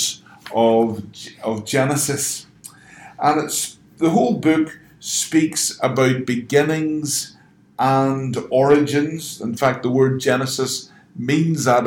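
Hard clipping at 5.84 to 6.02 s, 8.70 to 8.74 s and 9.63 to 10.34 s: peaks overdrive a stage by about 1 to 3 dB and are flattened, adding crackle.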